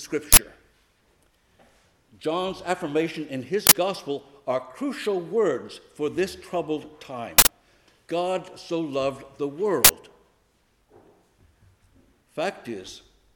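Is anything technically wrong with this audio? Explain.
Yes. There are uninitialised buffer bursts at 0.33, 3.67, 7.38 and 9.85 s. Blocks were played before audio was written, so leftover memory sounds as loud digital noise. Most bursts last about 46 ms, which fits a 2048-sample block, and the one at 7.38 s lasts about 93 ms, which fits a 4096-sample block.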